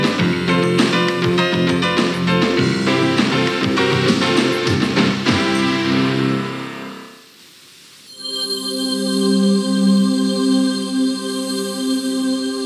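Nothing in the audio stood out as a technical problem on listening.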